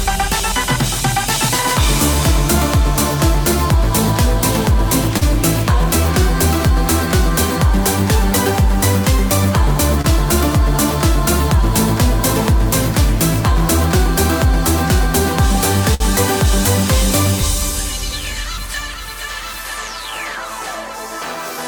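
Late packets emptied the jitter buffer, giving a short stall from a late packet at 5.17, 10.01 and 15.94 s: the sound holds for 40, 28 and 59 ms, then resumes with nothing lost.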